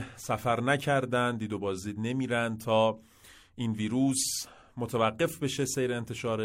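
Speech, no audible faults.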